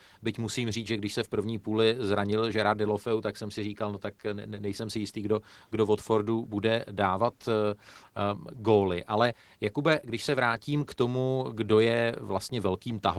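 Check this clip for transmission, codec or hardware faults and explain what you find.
One codec fault is present and runs through the whole clip. Opus voice compression: throughout, the speech sounds plainly coded, with a slightly hoarse, robotic texture from coarse excitation coding at a rate that fits roughly 16 kbps. The top band appears to be a thin CELT layer over SILK, with 20 ms framing.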